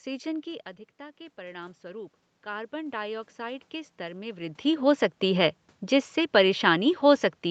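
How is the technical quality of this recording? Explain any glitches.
The recording has one clear glitch, a gain ramp. Automatic gain rising, 0.43 to 4.47 s: after the talker moved away and the level dropped about 12 dB, the gain control raised gain about 10 dB, so voice and room noise swell together.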